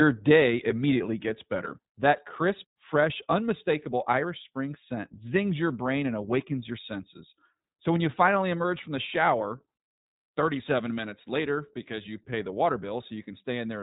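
From start to end, iLBC codec coding leaves a hard spectrogram ceiling at 4 kHz and plainly rough, synthetic speech, consistent with 20 ms frames.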